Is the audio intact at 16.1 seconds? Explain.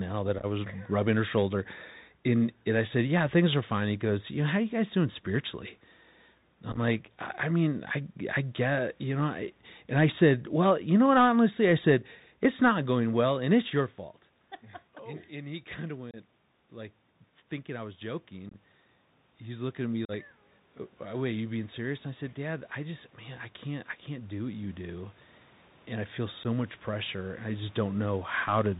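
No. Unconcealed Bluetooth headset packet loss cuts a hole from 16.11 to 16.16 s. About 26 ms of audio between headset and phone never arrived, which fits around seven short voice packets, and nothing was done to hide the gap. Silence or an idle pattern fills it, so the speech stops and restarts with abrupt edges that can click, and on this CVSD link the sound returns briefly quieter after the dropout.

The moment also falls inside an automatic gain rise running from 15.28 to 28.33 s. The speech had dropped by about 16 dB, following the talker's move away from the microphone at around 13.5 s. The gain control responded by raising its gain by about 15 dB, gradually over many seconds. Because the boost applies to everything, the voice and the room noise behind it swell together rather than the speech alone getting louder.

Underneath both, the Bluetooth CVSD headset codec shapes the whole clip, with plainly audible damage. 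It encodes one bit per sample at 64 kHz, each bit only stepping the signal up or down by an adaptive amount, and it passes nothing above 4 kHz. So at 16.1 s the speech is narrowband and muffled, loud high-frequency sounds overrun the step size and distort, s sounds turn scratchy, and a granular hiss sits under the speech.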